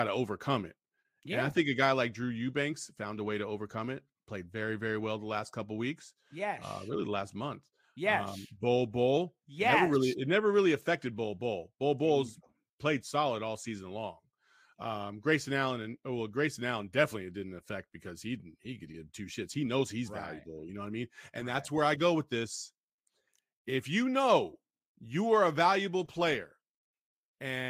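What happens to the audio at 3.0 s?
Nothing goes wrong at 3.0 s; the speech plays through that moment intact, with no dropout, click or distortion.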